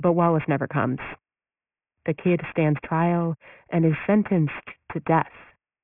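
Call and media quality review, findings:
Aliasing, throughout. Sibilants gritty and metallic, spectrum pinned hard against a 3 kHz band edge, folded tones fairly strong under the speech. Probable component: resampler without anti-alias filter, consistent with a 48 kHz to 6 kHz drop folding high content back downward.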